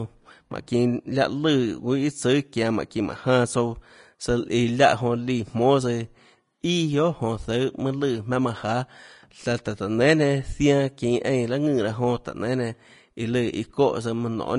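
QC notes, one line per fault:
Throughout, Vorbis compression, likely: the speech has a plainly audible hiss and grain, and nothing comes through above 10.5 kHz. That hard ceiling and the rough, noisy treble fit a low-quality Vorbis encode, around 34 kbps. The encoder drops the top band and quantises the remaining upper residue so coarsely that fine detail becomes noise of similar energy. Sibilants turn grainy, tones sound roughened, and consonant onsets lose their crispness.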